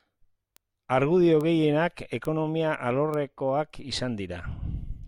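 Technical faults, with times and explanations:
0.57 s, 1.41 s, 2.25 s and 3.14 s: bit error spikes. Each is a single corrupted sample jumping to about -22 dBFS at first, then about -16 dBFS, heard as a sharp tick unrelated to the speech; the waveform shows a lone needle and the spectrogram a thin full-height vertical line.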